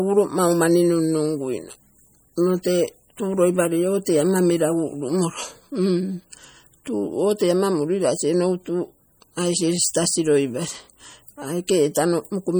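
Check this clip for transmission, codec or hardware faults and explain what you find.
MP3 compression damage runs through the whole speech clip and is plainly audible. Weak spectral detail flickers from frame to frame, giving a watery, swirly texture with chirpy sibilants and smeared onsets. The likely cause is an MP3 encoder starved of bits, consistent with roughly 48 kbps.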